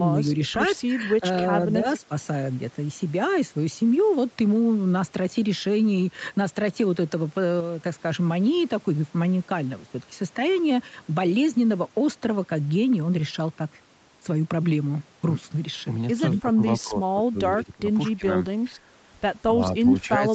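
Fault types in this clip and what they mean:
Speech suppressed in double talk: With both ends talking at once, the echo canceller likely could not tell the near talker apart from the loudspeaker echo, so it turned its output down to be safe. The speech here dips briefly between 1.75 and 2.11 s, by about 10 dB. From 16.41 to 18.27 s it sinks much harder, roughly a second of it falling by up to about 15 dB. A small dip of about 5 dB follows near 18.7 s, and the speech drops again by about 15 dB from 19.49 s to the end.
Echo leak: The other side is playing the call over a loudspeaker, and its echo canceller likely failed to remove everything its microphone picked up, so part of it was sent straight back. In this clip that shows as a short scrap of delayed copy between 16.34 and 16.41 s. It trails the original by 233 ms and sits about 20 dB below the speech, just before the long suppressed stretch begins.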